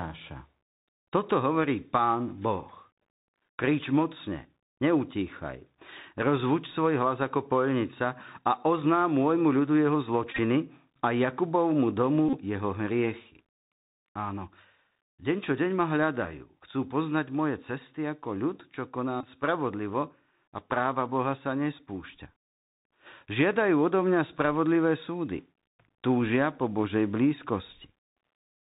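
Throughout, the speech passes through a Bluetooth CVSD headset codec, which fits 64 kbps CVSD: nothing above 4 kHz, scratchy s sounds and a granular hiss, unlike smooth bandlimiting. At 10.32 to 10.39 s, a Bluetooth headset packet repeated fault replays stale packets, about 45 ms in total, in runs up to roughly 20 ms, giving a steady buzz near 267 Hz rather than silence. The same buzz returns at 12.29 to 12.38 s, about 41 ms, in runs near 30 ms, and at 19.21 to 19.27 s, about 23 ms.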